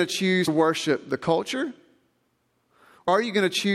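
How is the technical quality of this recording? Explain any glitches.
The recording has two glitches from compressed frames skipped, at 0.47 s and 3.07 s. Whole compressed frames were lost or rejected in decoding, so the speech jumps ahead by roughly 100 ms and then roughly 150 ms. That fits a handful of 23.2 ms frames.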